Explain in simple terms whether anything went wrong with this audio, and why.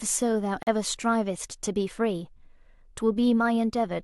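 Gap between stream segments at 0.63 s: two pieces' timestamps don't quite meet, so the player drops in 40 ms of abrupt silence. No sound is lost.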